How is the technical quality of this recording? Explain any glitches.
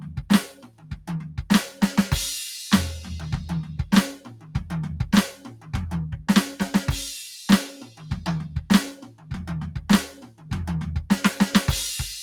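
The recording is technically compromised. A speech-oriented processor is working on music, and it audibly damages the sound.

Throughout the clip, a noise suppressor applied to music or sounds is active. It treats sustained tones and decaying tails as if they were background noise and keeps pulling them down. Attacks pass through. The held material underneath rises and falls by about 10 dB. The music pumps and flutters. Its body thins out between the stronger onsets.

At eight points the suppressor cuts the sound harder. These moments of sound cut by the noise suppressor fall at 0.0 to 0.18 s, 0.52 to 1.38 s, 4.18 to 4.55 s, 5.34 to 5.74 s, 7.84 to 8.11 s, 8.54 to 8.7 s, 8.98 to 9.31 s and 10.12 to 10.51 s. Drops range from about 7 dB to about 16 dB, deepest around 0.52 to 1.38 s. Sustains sag and decays are chopped short, like brief holes in the music.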